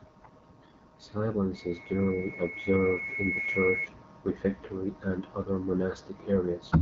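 Loudspeaker feedback squeal from 1.54 s to 3.88 s cuts across this speech: a single 2.2 kHz tone swells over roughly two seconds to a few decibels above the voice, then stops just before "refectory and other". The microphone was re-amplifying its own loudspeaker at that frequency. The AMR wideband (HD Voice) codec damage is audible throughout, with a rough, raspy texture and buzzy, noise-filled treble. This points to one of the lowest AMR-WB rates, around 8.85 kbit/s, where the speech model is starved of bits.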